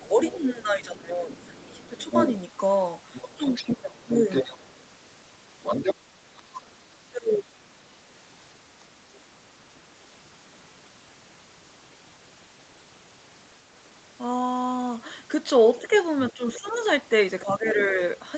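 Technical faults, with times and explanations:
0.00–2.11 s, 3.37–4.11 s, 6.31–7.62 s, 15.79 s to end: speech suppressed in double talk. The talker dips by up to about 15, 15, 25 and 10 dB, likely an echo canceller ducking both voices; the waveform shows sudden envelope notches.
0.25–0.38 s, 1.39–4.68 s, 5.63–5.95 s, 15.76 s to end: other side's voice leaking through. A second voice sits about 15, 5, 5 and 15 dB below the talker, likely residual loudspeaker echo, visible as overlapping harmonic stripes under 8 kHz.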